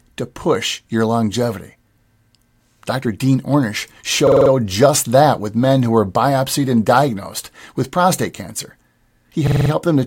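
A system hang loop occurs twice, at 4.27 to 4.51 s just before "just that with men" and at 9.47 to 9.71 s. Each time the computer stalled while the hardware replayed one 46.44 ms buffer, which fits a 2048-sample buffer, five times over. This produces a rapid, rattling stutter at 21.5 Hz.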